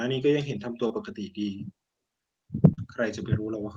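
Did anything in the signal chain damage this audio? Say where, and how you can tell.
Yes, at the network stage: two spots of short concealed packet loss. At 0.87 to 0.92 s the speech briefly smears, with about 20 ms of real audio gone, and at 2.74 to 2.79 s a longer wobble covers a 40 ms gap. In each case the receiver's decoder never got those packets in time. It extended the preceding sound to fill the hole, then cross-faded back into the arriving audio, leaving a short artificial blur.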